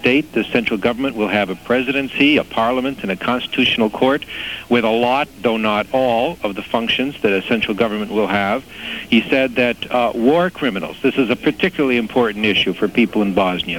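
No technical faults turn up anywhere in the recording.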